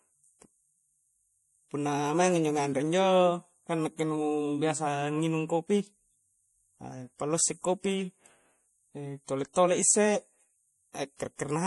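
Throughout, likely MP3 compression at a low bitrate: treble stops sharply near 11.4 kHz, a flat-topped spectrogram ceiling, and weak detail flickers frame to frame, sounding watery with smeared consonants.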